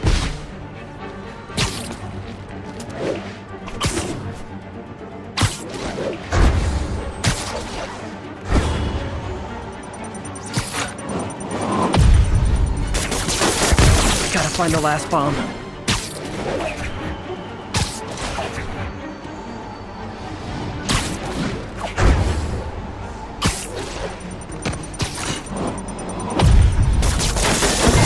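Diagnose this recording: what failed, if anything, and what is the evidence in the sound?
Nothing stood out on listening, and no stage of the chain showed any sign of failure.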